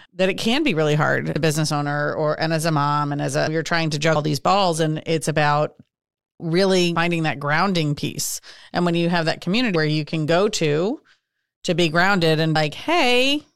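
At 1.36, 4.16, 6.96, 9.76 and 12.56 s the speech skips forward, each time losing roughly a fifth of a second with the two sides butted together. This is audio missing between chunks, likely from 3-second blocks. Unlike a dropout, no silent gap remains.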